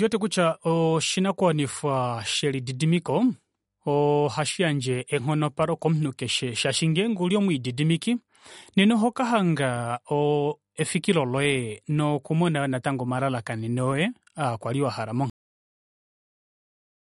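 The speech sounds watery and swirly throughout, with nothing above 11.2 kHz; likely MP3 compression, the plainly audible damage fitting a bitrate around 48 kbps. At 15.30 s, right after "omalalakaneno oye aakwali wahala", a cut-off end drops the sound mid-sound into digital silence with no decay, because the final buffers never played.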